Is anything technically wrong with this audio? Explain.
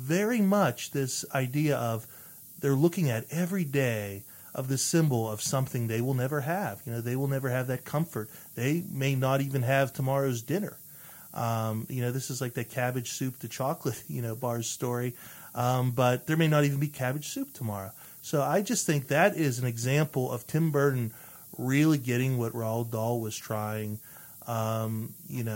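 Yes. Throughout the speech there is low bit depth with noise shaping: the audio is reduced to 8 bits, and the rounding error is fed back so it gathers in the treble. This gives a constant thin hiss, only roughly 15 dB below the speech, rising sharply toward the top of the band. On a spectrogram it appears as a continuous haze that brightens toward the highest frequencies, even between phrases. The waveform shows a fuzzy floor that never reaches silence.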